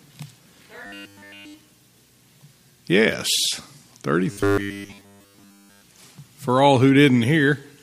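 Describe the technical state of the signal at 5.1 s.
At 5.1 s the signal has robotic sound from repeated short buffers, spanning 4.31 to 5.81 s. The likely cause is audio arriving too seldom, so a roughly 10 ms segment is looped, essentially replacing the real sound with a rigid, metallic 100 Hz buzz.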